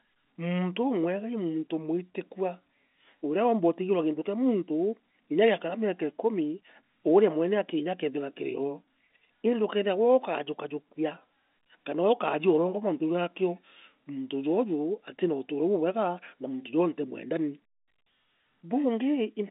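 No technical faults are audible.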